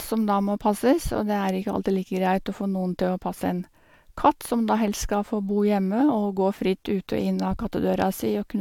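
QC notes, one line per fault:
No fault to note in this speech clip.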